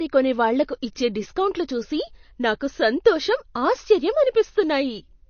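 Likely heavy MP3 compression, at a rate that fits a low bitrate around 32 kbps, runs through this speech clip from start to finish. Nothing is left above 6.6 kHz, so the speech sounds dull. Plainly audible watery, swirling artefacts come from weak frequency components flickering between frames.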